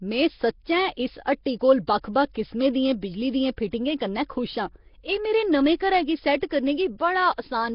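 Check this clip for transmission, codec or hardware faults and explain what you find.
Two faults are present: a codec coloration running through the whole speech clip, and four brief pre-echoes ahead of sharp onsets.

Nellymoser compression, throughout: the speech carries a rough, hissy halo and a smeared, underwater quality, with heavy codec damage and nothing above 5.3 kHz. The likely cause is Nellymoser Asao, the old Flash microphone codec, at a rate that fits roughly 22 kbps. It gives each block a fixed, small bit budget, so weak bands get no bits and are filled with noise. That noise-filled grain sets it apart from ordinary low-bitrate MP3 swirl.

Pre-echo, at 1.87 s (after "इस हट्टी कोल", before "बक्ख बक्ख किसमें दियें"), at 3.57 s, from 3.71 to 3.73 s (before "कन्नै खुश आं"), and from 6.40 to 6.42 s (after "मेरे नमें घरै गी"): a short hiss of 11 to 24 ms precedes each attack, which sounds softened. 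The transform spreads quantisation noise across its whole block, so noise sized for a loud onset late in the block leaks into the quiet moment before it. Because the hiss comes before the attack, it cannot be a click or room reverb, which would sit on or after it.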